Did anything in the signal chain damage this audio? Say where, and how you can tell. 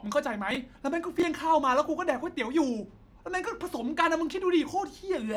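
Yes. Chunks out of order damaged the speech at the driver or buffer stage. Two brief jumbled moments occur at 0.51 to 0.56 s and 1.20 to 1.23 s. In each, one chunk of about 11.6 ms, which fits a 512-sample buffer at 44.1 kHz, was delivered late and plays after the chunks that should follow it, three chunks late in the first case and two in the second. Nothing is missing, but the reordering leaves three hard joins at each spot.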